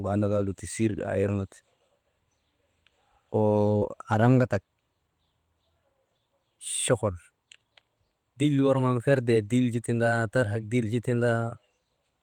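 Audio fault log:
3.77–3.83 s, short concealed packet loss: about 40 ms of the speech failed to arrive at the decoder in time, and the receiver covered the gap by extending the preceding sound for roughly 38 ms, carrying its pitch forward where it was voiced or substituting shaped noise where it was not, before crossfading back into the genuine signal. The invented stretch cannot match what was actually said, so it registers as a brief smear or wobble, and a short consonant there can drop out.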